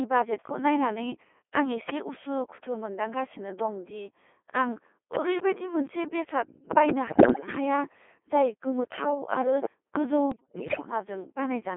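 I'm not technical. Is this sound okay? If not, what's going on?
No. The whole clip has passed through the Codec 2 vocoder, a digital-radio voice system that sends only a rough description of the voice and rebuilds it from tones. That is why the speech sounds robotic and buzzy throughout, rather than muffled the way a poor phone line would.

On top of that there are bit errors on digital voice radio, from about 7.08 to 7.48 s (just before "हाया जाय गोमोथाव आरो") and from 10.32 to 10.92 s. Here corrupted data scrambles the voice itself, so it warbles, bleeps and jumps in pitch instead of dropping out to silence.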